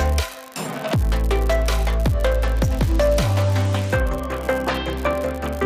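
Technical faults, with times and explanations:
Throughout: unreliable data bit. A steady crackling fizz sits under the whole clip and carries on unchanged through the pauses, so it is not tied to the programme level. One bit line in the sample data is marginal, and in a random fraction of samples that bit reads wrong. Each error adds or removes a fixed step of about -16 dBFS, so every click has the same size. Because the errors are scattered at random, they merge into a constant fizz rather than separate clicks.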